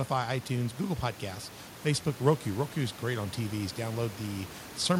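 Speech with no technical faults to report; the background room noise, about 19 dB below the speech, belongs to the recording space rather than the system.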